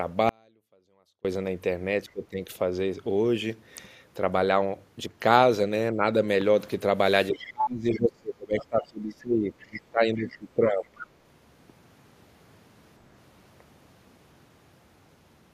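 A likely break in the transmission path, with the line after it staying live, causes an audio dropout to a faint residue in this speech recording: from 0.29 to 1.25 s nearly a second of signal is lost, leaving only faint sound about 35 dB down before the speech cuts back in abruptly. An echo canceller that likely couldn't separate its own talker from loudspeaker echo during double talk turned both down, so speech is suppressed in double talk at 2.05 to 2.39 s (a dip of about 20 dB), briefly and slightly at 5.93 to 6.04 s, and across most of 7.3 to 10.97 s, where the voice sinks by up to about 25 dB. In that same stretch, incomplete echo cancellation likely lets the other side's voice leak through in short scraps at 7.40 to 7.44, 7.94 to 7.98, 9.60 to 9.81, 10.33 to 10.37 and 10.86 to 11.07 s, heard roughly 20 to 30 dB below the talker.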